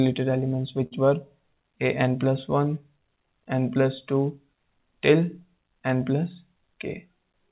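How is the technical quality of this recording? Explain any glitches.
The recording has two timing glitches, both from the jitter buffer of a call path. The audio is band-limited with nothing above 4 kHz, consistent with a G.711 mu-law telephone codec.

From 0.86 to 0.93 s there is a short stall from a late packet. A packet missed its playout time, so the receiver stretched the last sound by 51 ms until the packet arrived, then resumed where it left off. Nothing is lost, but one sound hangs too long with a faint buzzy, slightly dipped quality. On a spectrogram the harmonics run flat and smeared for that stretch. The waveform shows repeated, near-identical cycles.

From 6.47 to 7.24 s there is a jitter buffer speed-up. The buffer held more audio than its target, so the receiver trimmed short pitch-period-length pieces over and over, removing about 50 ms in total. Playback runs at 106% speed with unchanged pitch, so this stretch sounds slightly hurried. 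On a spectrogram the harmonic lines keep their spacing while events arrive a little closer together. The waveform shows small, regular splices that are hard to spot by eye.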